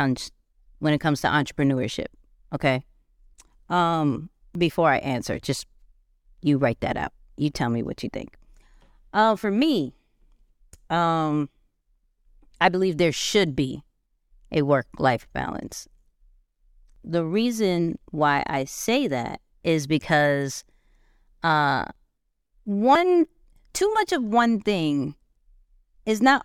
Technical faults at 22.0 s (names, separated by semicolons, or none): dropped buffer (overrun)